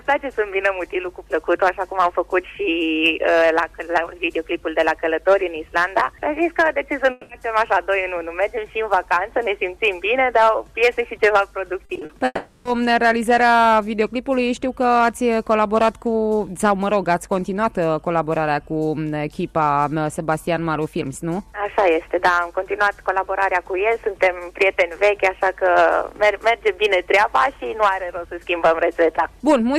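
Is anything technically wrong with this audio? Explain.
Yes, there are two kinds of trouble here, and they cluster around the 7 and 12 second marks.

The first is a long network dropout, heard twice. From 7.11 to 7.31 s the audio stops moving forward, and the gap is papered over with a stretched-out continuation of the last sound, a smeared, fading buzz lasting about 180 ms. The same thing happens from 12.25 to 12.67 s, but longer. About 400 ms is bridged this way, and the fill thins out into roughly 20 ms of silence before the real audio resumes. In both spots, the audio that should have been there is simply gone. The likely cause is a stall in the stream where nothing arrived in time.

Just before that second dropout, from 11.85 to 12.11 s, there's repeated packet loss with a robotic sound. Several short holes land close together, the longest about 40 ms. Each is patched by repeating what came just before, so nearly half of that quarter-second is synthetic fill. 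The result is a choppy sound with pieces chewed out. It ends shortly before the long dropout at 12.25 s.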